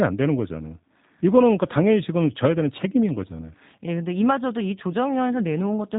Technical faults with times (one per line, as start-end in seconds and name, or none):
0.00-5.99 G.729 codec